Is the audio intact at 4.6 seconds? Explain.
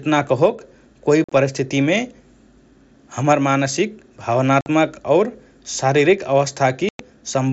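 No. From 4.61 to 4.66 s, unconcealed Bluetooth headset packet loss drops about 52.5 ms of speech between headset and phone, a gap that fits around seven lost mSBC frames. Nothing fills it, so it sounds like a hard-edged silent hole that can click, rather than the smeared or repeated sound of concealment.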